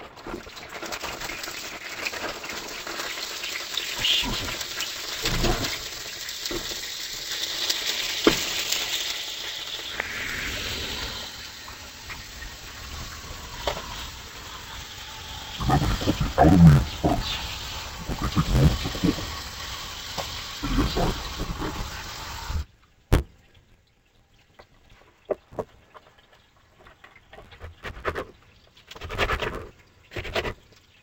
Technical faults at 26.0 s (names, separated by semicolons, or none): interleaved audio read as planar